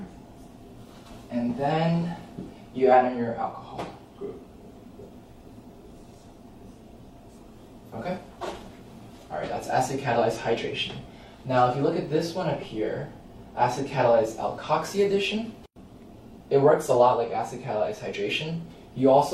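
No technical faults can be heard anywhere in the recording. There is nothing at any moment that calls for comment.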